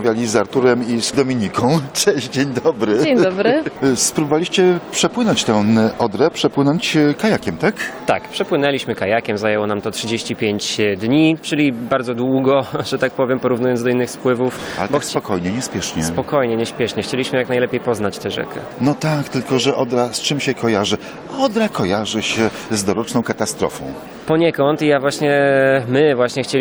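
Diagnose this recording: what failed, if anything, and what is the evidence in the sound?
Nothing failed; no fault is audible anywhere.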